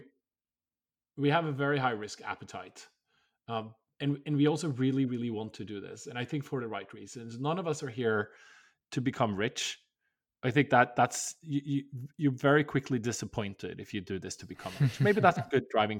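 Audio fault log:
No faults are heard anywhere in the speech recording. Nothing in the audio calls for an entry in this log.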